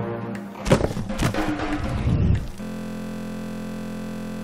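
A system hang loop takes over at 2.63 s and runs to the end: the playback system froze while the sound hardware kept replaying one 23.22 ms stretch of its buffer, which fits a 1024-sample buffer. Repeating 43.1 times a second, it becomes a steady buzz.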